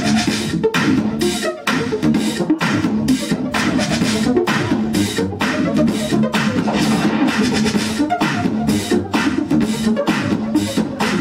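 No technical faults can be heard anywhere in the audio.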